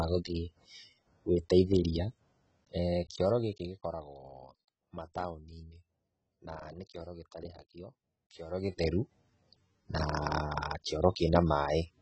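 Speech runs dull and smeared throughout, with a fizzy, warbling texture and nothing above 8.3 kHz, likely from heavy AAC compression at a bitrate near 16 kbps. From 2.74 to 4.08 s, a fine ticking zipper noise rides under the speech as the level drops by roughly 15 dB in coarse steps, about thirty per second.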